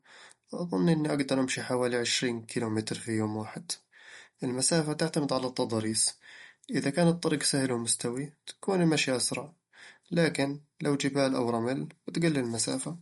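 Likely MP3 compression, in line with about 48 kbps, starves the encoder of bits throughout: nothing remains above 11.2 kHz, leaving dull, watery, swirly speech.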